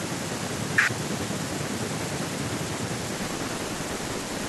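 From 3.17 s to the end of the clip, a filter restarted on every block can be heard. The filter loses its memory at each block boundary and begins again from silence. Each restart leaves a small transient. These transients repeat at 188 Hz, which fits a 256-sample block. The result is a steady buzz laid over the speech. It rises and falls with the level of the speech, loudest on strong syllables.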